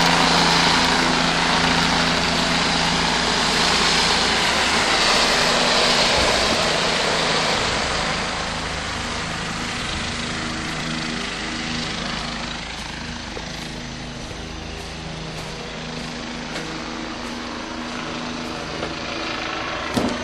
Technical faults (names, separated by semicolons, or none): hard clipping